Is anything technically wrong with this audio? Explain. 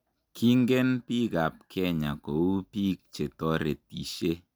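No, nothing is technically wrong with this audio. It is a short speech recording, and no technical fault can be heard anywhere in it.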